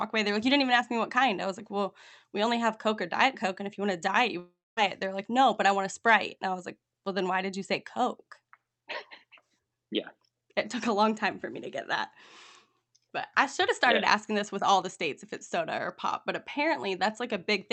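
At 4.39 s, right after "want a diet you", the speech stops and the last sound is stretched into a fading buzz before giving way to about a quarter second of silence. Speech resumes at 4.79 s with roughly 0.4 s missing. The likely cause is a long network dropout. Unlike a brief packet loss, where concealment bridges the gap almost seamlessly, the fill here decays into silence, and the lost stretch never returns. Throughout, the call codec limits the audio to about 8 kHz.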